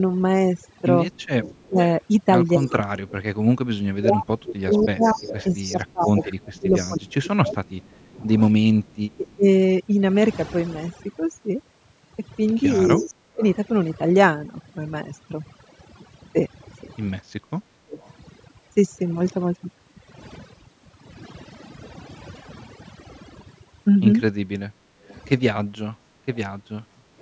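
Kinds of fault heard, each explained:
Overdone noise removal: The whole clip has been through noise reduction set far too strong. Individual frequency bands near the noise estimate are pushed down or switched off. Quiet parts of the speech vanish along with the noise. The background drops and breaks up into twinkling specks. The upper range also stops near 8 kHz, which is just the call's normal bandwidth.
Echo leak: A faint delayed copy of the voice trails the speech by about 234 ms. It runs from 1.42 to 9.35 s, again at 12.74 to 13.55 s, briefly at 18.0 s, and from 25.09 to 26.37 s. It is strongest around 13 s and barely audible near 18 s. The likely cause is an echo canceller on a loudspeaker side leaving residue, which was sent back.
Speech suppressed in double talk: The voice repeatedly sinks, thins out or breaks into pieces while other sound overlaps it. The dips are deep, on the order of 30 dB. 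The longest stretch runs from 1.66 to 9.45 s, with shorter ones at 12.83 to 13.43 s and 17.6 to 18.0 s. Both sides likely talked at once. The echo canceller then could not tell the talker from loudspeaker echo, and turned everything down.
Background gated by the echo canceller: The room sound abruptly drops and then returns. The first dip is a brief one at 17.22 s, about 13 dB down. A longer, patchy one starts at 24.7 s and lasts to the end, falling about 15 dB. These happen while the loudspeaker side is active. The canceller clamps the microphone hard, and the background pumps back in when it releases.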